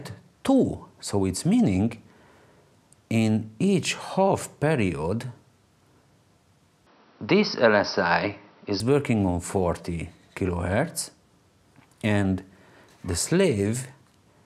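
Input switched to a poorer device, from 6.87 to 8.80 s: with no gap and no obvious level jump, the audio turns duller, with nothing above 5.8 kHz and a faint new background noise roughly 40 dB down, likely from a change to another microphone.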